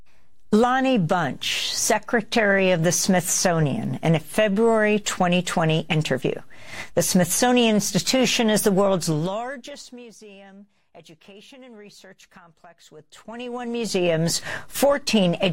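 Zipper noise at 8.95–10.15 s and 12.94–14.14 s: the level falls, then rises, by roughly 25 dB in unsmoothed 2 dB steps, around fifteen per second, each ticking audibly.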